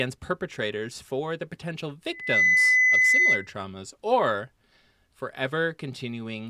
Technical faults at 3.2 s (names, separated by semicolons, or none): loudspeaker feedback squeal